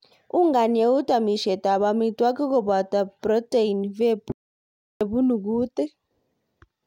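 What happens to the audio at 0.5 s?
Nothing goes wrong at 0.5 s; the speech plays through that moment intact, with no dropout, click or distortion.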